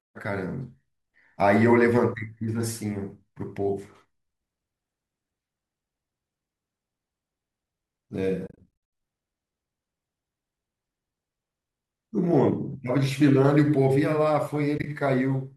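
Speech with two stretches of soft-edged dropouts: the sound fades out and back in repeatedly between 8.47 and 8.67 s, with the longest gap under a tenth of a second, and again very briefly between 14.78 and 14.86 s. This is AAC frame loss with muting. The decoder zeroes each missing frame's spectrum, and the overlapping windows smooth the edges into gentle holes instead of hard cuts.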